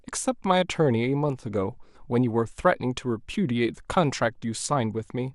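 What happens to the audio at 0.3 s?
At 0.3 s the speech carries the MP2 compression damage present throughout the clip. The sound is dull and gurgling, with a granular edge, likely because starved sub-bands are switched off and coarsely quantised, which fits a bitrate around 80 kbps.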